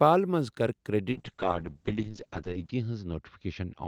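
A speech recording with a call bitrate drop starting at 1.13 s and lasting to the end. The encoder's budget falls from 48 kbps to 7 kbps, holding its lowest rate for about 1.6 s. Coarser coding makes the voice rough and watery, and the coded bandwidth shrinks from 20 kHz to 8 kHz, muffling it. On a spectrogram, energy above 8 kHz cuts off during the drop, leaving a flat ceiling with smeared, blocky texture below.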